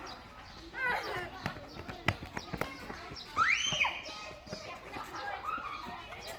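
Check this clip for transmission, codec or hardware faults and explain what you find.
One fault runs throughout: likely Opus compression in its CELT music mode, at a rate that fits about 24 kbps. Starved of bits, it holds each band's energy but fills the detail with folded or noise content, so the sound is plainly grainy and rough while still reaching about 20.2 kHz.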